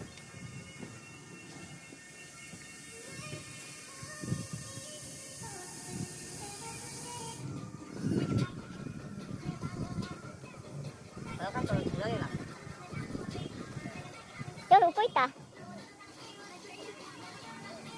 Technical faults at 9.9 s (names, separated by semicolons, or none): wrong sample rate